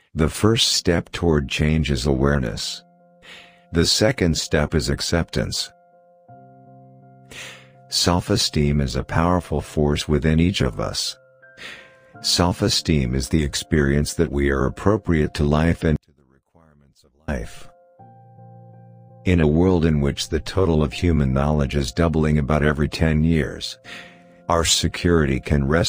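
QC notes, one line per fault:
15.96 to 17.28 s, one channel inverted: for about 1.3 s the sound nearly disappears when the channels are summed to mono, dropping by about 36 dB. The likely cause is reversed polarity on one stereo channel, so material common to both sides cancels, leaving only their faint difference. On a waveform the summed signal collapses to a thin sliver across that span. On a spectrogram the band goes dark before full level returns at 17.28 s.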